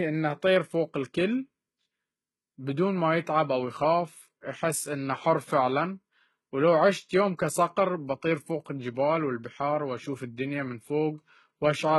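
A speech recording with heavy HE-AAC compression damage throughout, likely from a very low bitrate stream, which fits roughly 16 kbps HE-AAC v2. The upper range is rebuilt by copying lower bands upward rather than coded, so s sounds come out gritty, metallic or lisping. On a spectrogram the treble appears as blocky, repeated patches whose harmonics fail to line up with those below the crossover, with nothing above 21.6 kHz.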